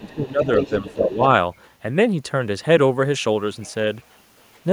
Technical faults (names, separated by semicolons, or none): speech suppressed in double talk; other side's voice leaking through